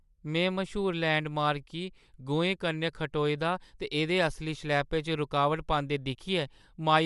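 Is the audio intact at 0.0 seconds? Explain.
No. The speech already has a grainy, breathy edge at 0.0 s, lasting the whole clip, likely from Bluetooth LC3 compression, consistent with roughly 48 kbps and noise-filled upper frequencies.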